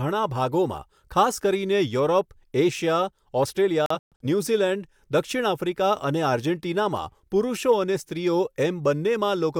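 A digital broadcast dropout hits this speech clip between 3.86 and 4.25 s. The receiver stopped getting valid frames and muted, leaving several short holes that total 213 ms, the longest 128 ms. That audio is gone, which fits a handful of lost frames.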